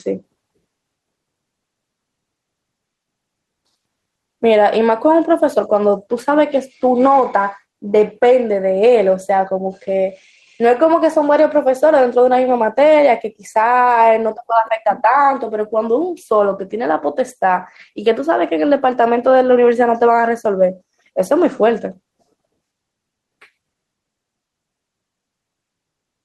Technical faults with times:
0.00-26.24 gain pumping

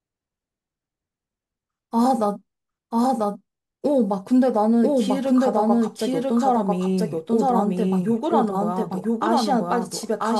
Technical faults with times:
0.00-10.39 doubled audio track

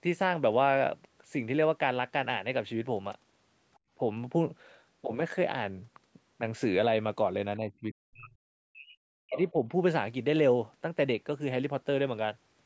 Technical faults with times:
3.75-3.79 other side's voice leaking through
3.79-3.91 background gated by the echo canceller
7.58-8.31 speech suppressed in double talk
8.69-9.69 speech suppressed in double talk
9.33-9.49 other side's voice leaking through

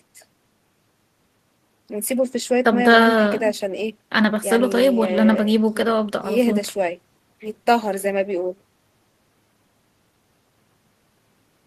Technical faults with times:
none

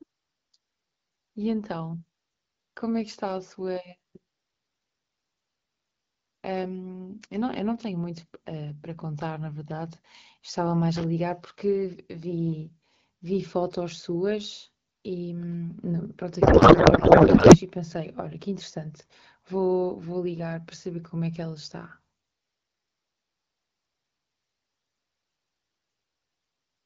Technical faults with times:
10.96-11.04 loose connector crackle
16.41-17.58 codec payload misread

